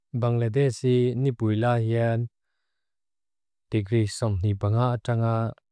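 No technical faults can be heard anywhere in the recording.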